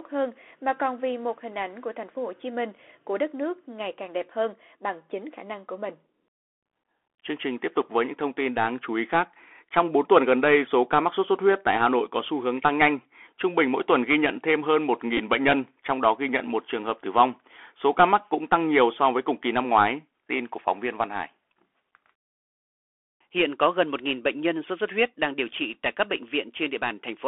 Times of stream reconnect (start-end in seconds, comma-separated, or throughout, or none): none